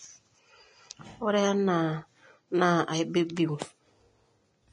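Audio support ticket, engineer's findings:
Hissy, grainy speech across the whole clip, nothing above about 10.6 kHz. Likely Vorbis compression at a low setting, maybe around 30 kbps: treble quantised so coarsely it's swapped for matching noise, roughening tones and smearing attacks.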